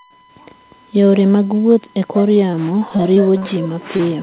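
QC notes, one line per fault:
Throughout: USB whine. Current drawn by the USB bus in 1 ms frames is leaking into the audio through the power or ground, which puts a steady, fixed-pitch tone at 1 kHz under the speech, its strongest component, roughly 30 dB below the signal. The band stops at 4 kHz, as a narrowband call path like G.711 A-law would, so only the low whine survives. Because its pitch never moves, it stands apart from the speech as a thin electrical hum.
2.34–3.47 s: repeated packet loss (robotic sound). Starting right after "mag wuoth e kor", audio kept failing to reach the decoder in time, leaving around nine holes of up to 40 ms each, about 180 ms missing in all. The receiver patched each hole by stretching the last sound, and those patches fill about 15% of this stretch. With a new hole arriving before the last has settled, the speech turns choppy, with small pieces dropped out.
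3.97–4.01 s: short concealed packet loss. About 20 ms of the call never reached the decoder in time. The receiver covered the hole with roughly 22 ms of sound extrapolated from just before it, continuing the pitch if the speech was voiced or shaped noise if it was not, and then blended back into the real signal. The result is a single brief smear or wobble near the end of the clip, and a short consonant there may be lost.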